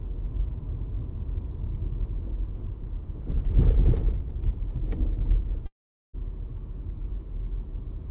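A long network dropout runs from 5.66 s to 6.15 s in this recording of sounds, carried over a narrowband call path that leaves nothing above 4 kHz, as a G.711 codec would. For about half a second the audio stops arriving. The receiver stretches the last sound into a fading buzz before it drops to near silence, and the sound then resumes with that stretch missing. The likely cause is a run of lost packets that concealment could only partly cover.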